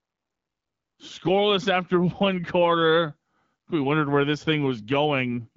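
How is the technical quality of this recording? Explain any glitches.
No glitches are audible in the recording; the speech arrives through an AMR wideband (HD Voice) codec at 12.65 kbit/s, a rate at which it stays clear and shows only light codec damage.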